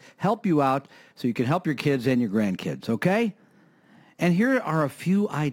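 Throughout the speech there is crude rate conversion. Samples were repeated rather than filtered, which fits a 44.1 kHz to 48 kHz change. This leaves a gritty, inharmonic fizz about 30 dB down that follows loud, bright syllables. A spectrogram shows faint stray tones spread across the upper band.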